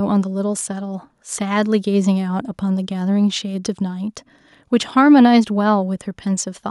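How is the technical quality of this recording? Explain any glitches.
The technical quality of this recording is good, with no glitches to explain.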